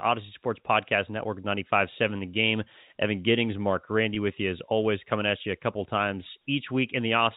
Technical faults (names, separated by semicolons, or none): packet loss with pitch repetition